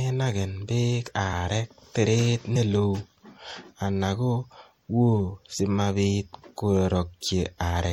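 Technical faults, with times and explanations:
Throughout: MP3 compression, likely at a low bitrate near 64 kbps; starved bits cut the treble and make the speech sound watery and swirly.
2.55 s, 5.58 s and 7.62 s: compressed frames skipped. Missing frames jump the audio ahead about 50, 50 and 100 ms, which fits a 26 ms frame length. Each join is a brief smeared blip.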